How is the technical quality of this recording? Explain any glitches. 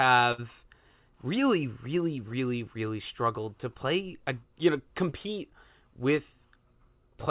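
Two packet-loss glitches break into the speech, one near the start and one later. The audio is band-limited with nothing above 4 kHz, which points to a call path running G.711 mu-law at 64 kbps.

At 0.32 to 0.40 s there is a burst of packet loss. About 60 ms of audio never arrived in time, so the receiver kept extending the last sound and faded it down across the gap. It comes out as a short held buzz or dying hiss, and the speech then resumes slightly further on with that stretch gone. A spectrogram would show smeared, repeating harmonic or noise bands with no new detail, dimming toward the end. The waveform would show a decaying, unnaturally regular patch before a jump to fresh material.

At 5.10 to 5.14 s, just after "a uh you know", there is a short concealed packet loss. Roughly 20 ms went missing and the decoder patched it by continuing the previous sound, then blending back into the real signal. 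It is heard as a brief smear or wobble in the flow. On a spectrogram it is a sliver where the harmonics or noise simply stretch sideways. The waveform shows the previous sound briefly carried on at the seam.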